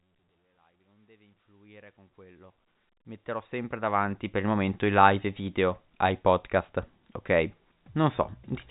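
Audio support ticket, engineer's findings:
No faults found in this speech clip. Level rises in a smooth fade from the start to about 4.6 s, and the G.711 telephone coding (A-law) cuts everything above 3.8 kHz, which fits a 64 kbps phone line.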